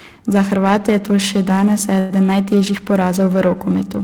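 Periodic clock jitter runs throughout: the converter clock wobbles at about 1 kHz, spreading sidebands around every component and giving the speech a rough, metallic edge.

A call audio freeze follows at 1.99 to 2.12 s, right after "je to še danes": the jitter buffer likely ran dry, so about 0.1 s of fading continuation of the last sound is inserted, delaying the rest with nothing lost.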